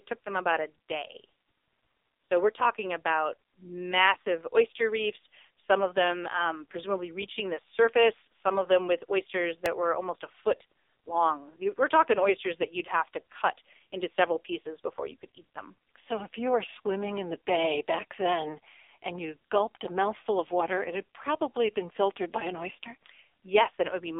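Throughout, the speech sounds boxy, buzzy and synthetic, with heavy codec damage and nothing above 3.7 kHz. This is the AMR narrowband mobile codec at work: it rebuilds the voice from a vocal tract model and a few pulses, and the buzziness fits a low mode around 5.9 kbps.

At 9.66 s, between "of them with oysters" and "were almost a foot", there is a brief click or buzz. This is a repeated buffer: new audio arrived late, so a tiny piece was replayed with hard joins. The sound fits a 64-sample buffer played twice more, and a few milliseconds of audio are lost.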